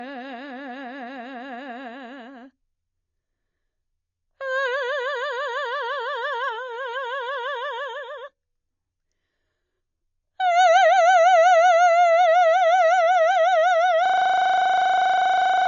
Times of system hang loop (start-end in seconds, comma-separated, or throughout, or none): 14.06-15.68